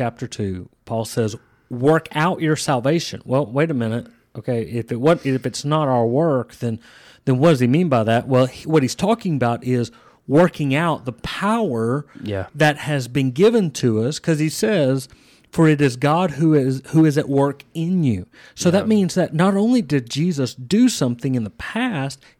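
Hard clipping runs through the speech, driven about 6 dB past full scale so under one percent of samples hit the ceiling. Waveform peaks appear squared off, with spectrogram energy smeared upward, heard as crackle on loud syllables.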